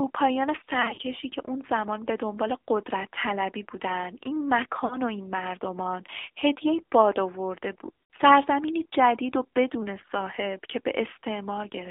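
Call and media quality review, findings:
AMR narrowband mobile codec, whole clip: buzzy, synthetic speech band-limited to 300 Hz–3.6 kHz, with plainly audible coding damage consistent with a low AMR-NB mode around 7.4 kbps. The vocal-tract model, fed by only a few pulses per subframe, cannot carry natural texture.

Lost AMR speech frames at 0.82–1.00 s, 4.86–4.97 s, 8.04–8.09 s and 9.82–9.86 s: brief warbles, dips and smeared, drawn-out sound, the first event the longest. Corrupted radio frames made the decoder repeat prior pitch and filter settings at falling gain.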